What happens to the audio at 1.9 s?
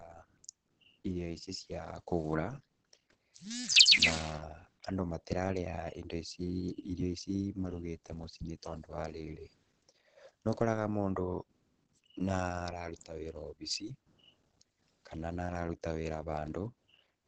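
Opus compression, present throughout including 1.9 s: the speech sounds muffled and hoarse with nothing above 8.5 kHz, likely from a low-rate encoder in its speech mode.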